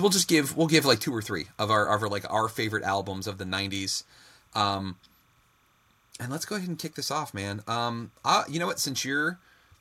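Running under the whole thing there's timecode bleed: linear timecode from a nearby track or cable has leaked in, and you get a chirpy warble flipping between two pitches an octave apart, roughly 1 kHz and 2 kHz. It sits well below the speech, around 40 dB down, so it stays behind everything, but it never stops. The rhythm of that switching fits 30-frame code.

From 0.74 to 0.91 s the loudest part of the speech picks up a crackly, flattened edge where the tops of the waveform get squared off. That's likely microphone overload: the input was set hot enough that peaks ran about 2 dB past what the converter could take. Only a small share of the samples are actually cut, so it's a brief burst of grit, not a constant fuzz.

At 1.02 s, just after that crackly stretch, the level drops about 5 dB in a single step, speech and background together. That pattern points to a microphone volume stepped down, likely the call software reacting to the clipping it just saw by pulling the device's input gain in one move. 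There's no fade, just a sudden jump down.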